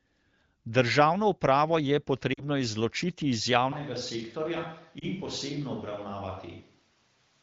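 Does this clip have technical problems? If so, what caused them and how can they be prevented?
Yes. Lost AMR speech frames cause a brief drop toward near silence from 2.33 to 2.44 s, just before "izločiti iz", and a brief dip or warble from 4.99 to 5.05 s. Radio errors corrupted the frames, so the decoder repeated the last good settings with falling gain. The gaps, 40 ms and 20 ms, fit two frames and one. Stronger error protection or better radio coverage would prevent this.

At 3.72 s, right after "izločiti iz", the sound suddenly turns roomy and hollow and stays that way to the end. It loses bass, drops by about 5 dB, and room noise rises to roughly 30 dB below the speech. The likely cause is a switch to a distant microphone after the close one failed or was left out. Checking the close microphone's connection and battery before recording would prevent this.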